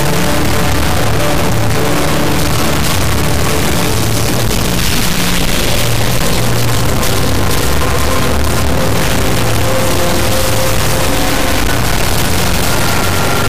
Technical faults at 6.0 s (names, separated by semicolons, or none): integer read as float